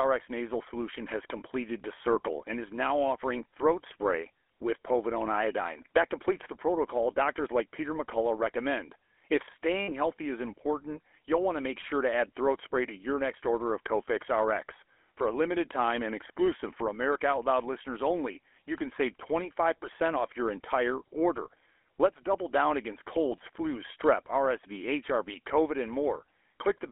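A buzzy, gravelly roughness runs through the whole recording, and the sound is confined to a narrow telephone band of roughly 300 Hz to 3.4 kHz, with plainly audible damage. This is the GSM full-rate codec, at a rate that fits its 13 kbps. It reduces the voice to a vocal-tract filter driven by a sparse, regularly spaced pulse train rather than the real excitation, and that coarse rebuilding produces the grainy buzz.

From 9.83 to 9.89 s the sound freezes into a brief rough, metallic ring for about 60 ms before normal audio resumes. These are lost GSM frames: the decoder had no valid data for that stretch, which fits three consecutive 20 ms frames, so it reused the parameters of the last good frame. Repeating those stale settings gives the short, tinny, sustained ring.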